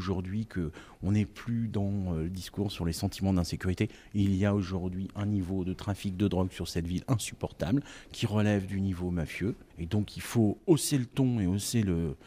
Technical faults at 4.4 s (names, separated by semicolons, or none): none